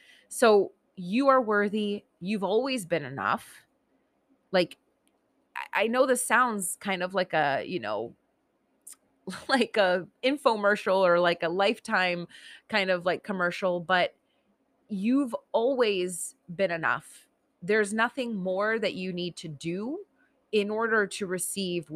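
Nothing here needs pointing out: the speech carries on without a single technical fault turning up anywhere along the way.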